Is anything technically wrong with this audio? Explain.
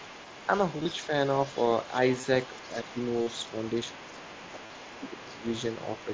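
Yes. Three problems affect this speech.

The other side's voice leaks through from the start to 1.07 s, and again from 1.24 s to the end. The remote voice is likely playing from the talker's loudspeaker back into the microphone, with the echo canceller failing to subtract all of it. What remains sits roughly 20 dB below the main talker, a faint second voice running underneath.

Concealed Bluetooth headset packet loss occurs four times: 0.78–0.85 s, 2.21–2.23 s, 3.22–3.27 s and 4.66–4.70 s. Voice packets between headset and phone went missing, and the receiver filled each gap by repeating the best-matching recent fragment of waveform. The first spot has about 45 ms lost in pieces over 75 ms, with no single gap longer than 22.5 ms. The others are solid gaps of 22.5 ms, 45 ms and 37.5 ms, heard as a brief buzzy, held tone and a slight warble as real sound resumes.

Speech is suppressed in double talk at 2.69–2.96 s, 3.85–4.46 s and 5.06–5.43 s. 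Here both sides spoke together, and the echo canceller likely could not separate the talker from the loudspeaker echo, so it turned the microphone signal down. The first dip is mild, about 5 dB. The other two reach about 15 dB, making the talker sound briefly sunk and clipped away.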